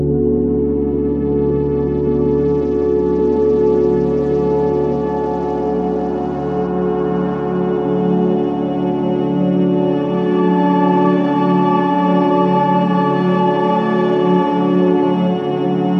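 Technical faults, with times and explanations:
No technical faults detected anywhere in the clip.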